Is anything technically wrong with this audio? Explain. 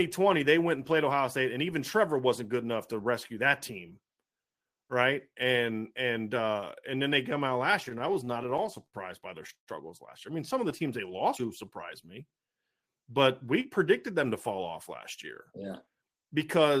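Yes, there are jitter buffer problems throughout the back half of this speech clip.

From 7.71 to 9.69 s, between "then they come out" and "last year I mean", you get repeated stalls (stutter). Packets were coming in late, so the buffer kept running dry and the receiver stretched the last sound to cover each gap, sixteen times in all. That fills about 336 ms (the longest hold is 127 ms) with nothing actually lost, but the delivery drags and hiccups.

From 10.62 to 12.13 s there's a jitter buffer slow-down. With the buffer running low, the receiver repeated tiny pitch-period chunks to build a reserve, adding 84 ms. Playback drops to 95% speed at the same pitch, so things sound a bit drawn out.

Then there are two jitter buffer speed-ups. From 14.10 to 14.74 s, between "but we" and "last year", it runs at 108%, trimming roughly 70 ms. From 15.52 to 16.66 s, right after "last year", it runs at 110%, trimming about a tenth of a second. 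In both cases the buffer had too much queued, so it cut out short pitch-period slices, and the result sounds rushed while the pitch stays put.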